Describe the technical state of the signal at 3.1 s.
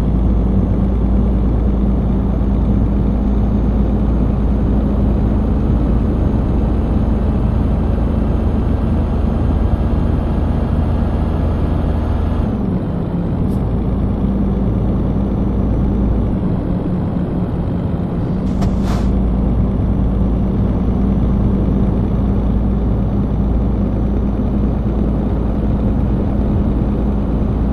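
The signal at 3.1 s is intact, with no dropout, clipping, glitch or other audible fault at that point.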